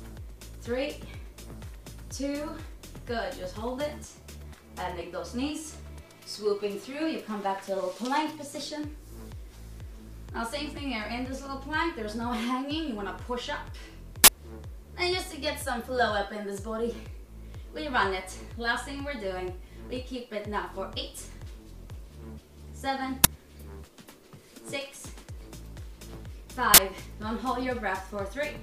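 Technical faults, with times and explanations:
14.24–14.28 s, 23.24 s and 26.74–26.78 s, uninitialised buffer: three loud bursts of digital noise lasting 40, 10 and 40 ms, where a block was played before any audio filled it, so stale memory came out. Unlike a dropout or click, each burst is a block-length blast of noise, not silence or a single spike.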